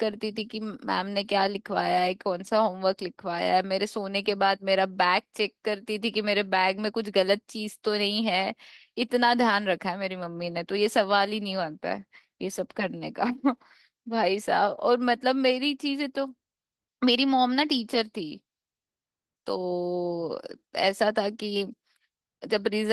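From start to finish the speech carries plainly audible Opus voice compression. The coarse, slightly hoarse and robotic texture points to hybrid mode at roughly 16 kbps: SILK handles the lower band and a thin CELT layer fills in the top, in 20 ms frames.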